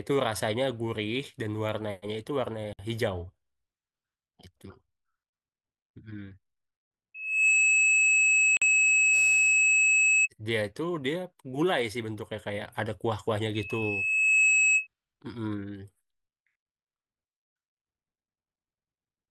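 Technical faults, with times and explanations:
2.73–2.79 s, gap at a join of encoded pieces: a 59 ms silence cuts into the speech with smeared edges, as leftover encoder delay and end-frame padding sit between separately encoded segments.
7.14–10.28 s, loudspeaker feedback squeal: a 2.6 kHz tone swells over roughly 0.4 s to around 10 dB above the speech, as the microphone re-amplifies the loudspeaker's output at that frequency.
8.57–8.62 s, gap at a join of encoded pieces: a 48 ms dropout, again from untrimmed codec delay and padding at a segment boundary, then the sound resumes where it stopped.
13.55–14.87 s, loudspeaker feedback squeal: the same 2.6 kHz howl returns, building more slowly, over about a second, to roughly 10 dB above the speech.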